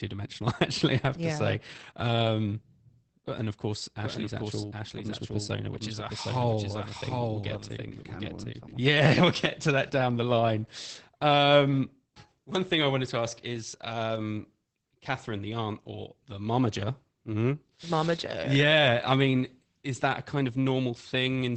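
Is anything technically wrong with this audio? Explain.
Yes, two faults. Throughout, Opus voice compression at 12 kbps in SILK mode limits the band to 8 kHz and codes the excitation coarsely, leaving the speech muffled, hoarse and slightly robotic. From 4.03 to 8.73 s, just after "and of course", a doubled audio track appears, likely a second, slower capture path, adding a clean copy about 5 dB quieter and roughly 0.7 s behind that starts and stops abruptly.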